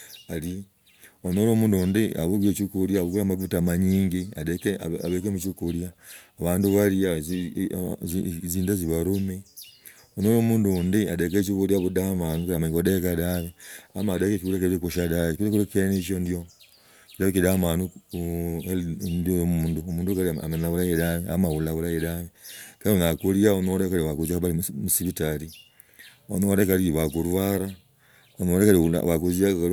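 Nothing in the speech stood out as a technical fault on listening.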